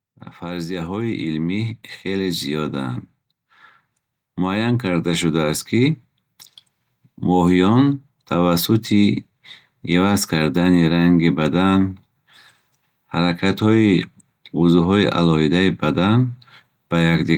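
From 0.45 to 3.02 s the automatic gain rising fault appears. The gain control judges the speech too quiet and lifts its gain slowly by about 6 dB, so voice and room noise swell together. It happens again from 4.35 to 6.01 s, about 4 dB this time. On a waveform the envelope ramps upward across each span. A spectrogram shows every band brightening at once, noise floor included.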